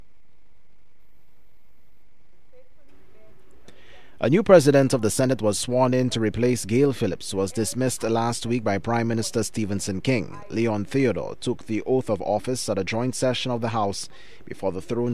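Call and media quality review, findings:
No audible faults found in the review; no artefacts, dropouts or distortion identified on the call or media path.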